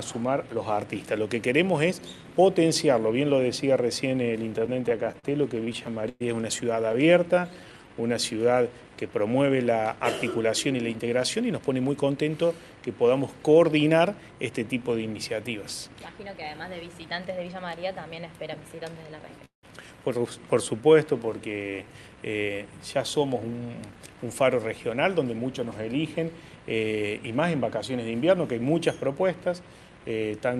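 Repeated stalls (stutter) run from 4.59 to 6.95 s: packets arrived late, the jitter buffer kept draining, and nineteen short gaps, the longest 113 ms, were bridged by continuing the last sound, so the audio drags and stutters.

Jitter buffer slow-down follows at 6.98 to 8.02 s. Repeated pitch periods add 139 ms to rebuild the reserve, so the audio plays at 87% speed at unchanged pitch.

Jitter buffer speed-up at 9.93 to 12.27 s trims roughly 150 ms of surplus buffered audio in small pieces, so the audio runs at 107% and sounds hurried.

A call audio freeze at 19.45 to 19.65 s stretches the last sound for 179 ms, fading into about 120 ms of silence before resuming where it stopped, likely because packets were held up and the buffer ran dry.

A second jitter buffer slow-down at 20.55 to 21.89 s adds 115 ms, slowing the audio to 92% with drawn-out sounds.

A second jitter buffer speed-up at 23.92 to 26.65 s removes roughly 200 ms at 107% speed. 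Throughout, the audio tops out around 12 kHz, which fits Opus at about 64 kbps.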